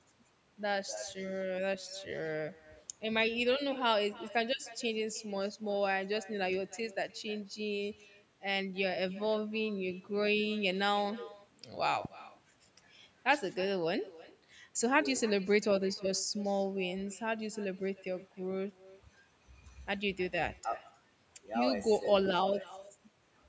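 From the start of the speech to the end, every phrase is followed by a faint, thin copy of itself arriving about a third of a second later and sitting about 20 dB below the direct sound. This is echo with no canceller: the far end played the call through a loudspeaker, its microphone picked it up, and nothing subtracted it before it returned across the network. Unlike room reverberation, which smears into a continuous tail, this comes back as a distinct, delayed repeat of the whole phrase.

At 12.05 to 12.07 s a single loud pop cuts in, peaking a little above the level of the speech, while the talking carries on underneath without a gap. It is one short, sharp transient rather than the flattened, buzzy tops of clipping or the silence of a dropout, so it points to a brief electrical step or pulse, likely from a connector, switch, static discharge or driver glitch, that was shaped by the circuitry that followed. 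The call's microphone processing shows in the absence of content above 8 kHz and the trimmed low bass.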